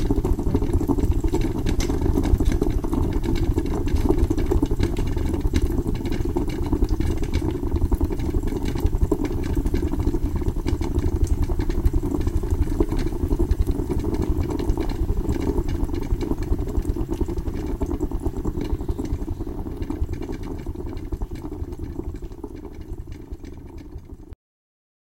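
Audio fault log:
24.33 s: cut-off end. The sound stops abruptly in the middle of an event at 24.33 s and falls straight to silence, with no decay or natural tail, for the remaining 0.75 s of the clip. This happens when the final buffers of audio were never written or played back. Whatever was sounding is truncated rather than allowed to fade, so the ending comes across as a sudden chop instead of a close.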